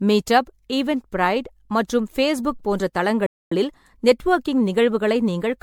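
From the very start the speech has that swirly, hollow quality of generation loss. Consonant attacks are smeared and the tone sounds watery, worse than a single lossy encode would leave it. It points to MP3 around 96 kbit/s, likely re-encoded around seven times over, with each pass landing on a shifted frame grid so the holes and noise build up.

Then at 3.26 s, right after "மற்றும் பேச்புக் போன்ற", there's a playback stall. The sound just drops to silence for about 250 ms, until 3.52 s. That gap is likely the player starving for data or its thread getting blocked, so nothing reached the output until it caught up.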